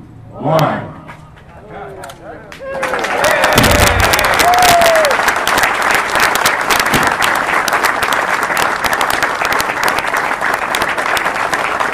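Integer overflow runs throughout. About 6 dB of excess gain pushes a small fraction of peaks past the limit. These wrap to the opposite sign, giving violent cracks sharper than clipping.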